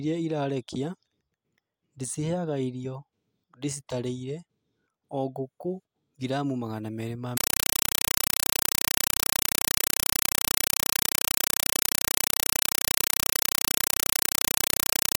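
Speech that, from 7.37 s to the end, right after "ngiramu magana meerĩ ma", is replaced by a compressed stream played as audio: loud static chattering at 31.25 Hz, each 5.33 ms noise burst followed by silence. That regular gating separates it from steady broadband noise, and fits an undecoded 256 kbps AC-3 stream.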